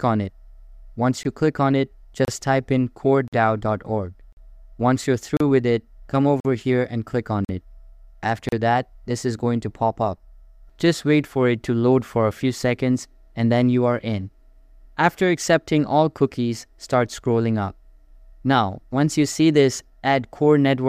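Hard-edged dropouts of silence, about 18 to 49 ms long, interrupt the sound at 1.23, 2.25, 3.28, 4.33, 5.37, 6.40, 7.45 and 8.49 s, once per second. This is a gap between stream segments: timestamps of consecutive 1 s segments leave small holes that the player pads with silence.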